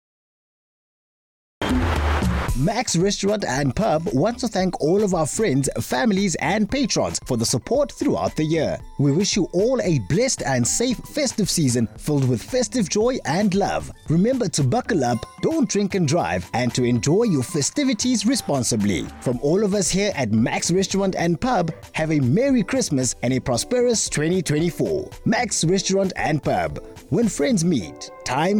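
The clip opens with a cut-off start. Digital silence runs until 1.62 s, then sound begins abruptly mid-event. Capture started late, so there is no natural attack.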